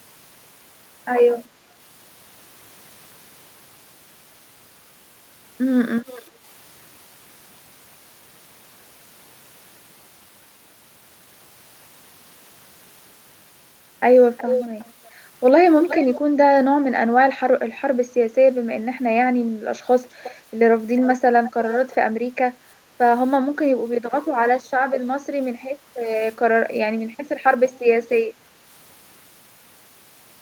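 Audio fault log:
6.06–6.23 s, 14.37–14.92 s, 15.83–16.15 s, 20.23–20.35 s, 21.44–21.52 s, 21.71–21.95 s: echo leak. An echo canceller on a loudspeaker end likely let its microphone's pickup through and sent it back, so a delayed copy of the speech returns about 370 ms late in the first three bursts and 360 ms late in the rest. The copies are short scraps, ranging from faint at 6.06 s to nearly as loud as the speech at 14.37 s.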